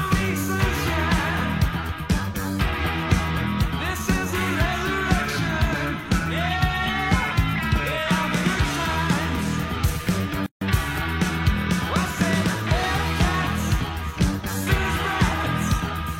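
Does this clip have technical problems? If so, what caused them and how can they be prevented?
Yes. From 10.46 to 10.61 s, a gap at a join of encoded pieces cuts the sound for about 151 ms. The pieces were encoded separately, and each kept its encoder start delay and last-frame padding. Trim that delay and padding before joining, or encode the audio in one pass.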